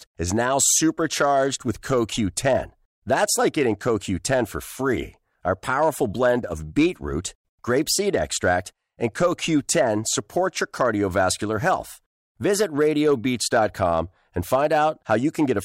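Throughout, the speech is driven about 3 dB past what a stage in the chain can pass, so the tallest peaks are sliced flat. Only a small fraction of samples is affected, which gives brief crackle on loud syllables rather than constant fuzz: hard clipping.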